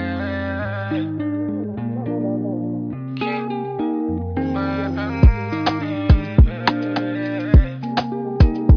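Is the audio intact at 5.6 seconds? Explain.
Yes, the audio is intact at 5.6 seconds, with no fault of any kind at that point.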